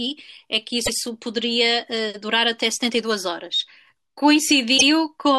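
Repeated frames: a run of compressed frames was played twice, so the speech stutters back over itself. At 0.85 s about 0.10 s repeats, fitting roughly four frames; at 4.77 s about 0.05 s repeats. Each repeat lengthens the audio by that amount.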